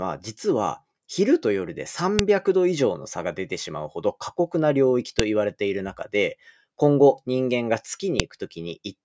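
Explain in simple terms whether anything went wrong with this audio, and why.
Sharp, loud clicks cut into the speech at 2.19, 5.19 and 8.20 seconds, one every 3 seconds. This is a file header played as audio: the recording was joined from 3-second pieces, and each piece's header data was played as sound.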